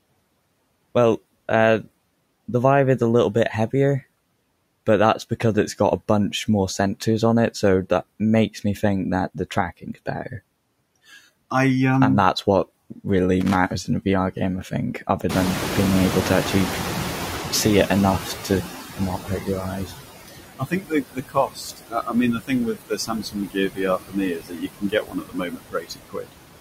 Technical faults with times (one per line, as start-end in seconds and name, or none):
0.00-26.60 noise suppressor artifacts
13.40-13.55 loose connector crackle
15.29-19.88 noise suppressor catching up
19.20-19.93 speech cut by the noise suppressor
20.57-26.35 speech cut by the noise suppressor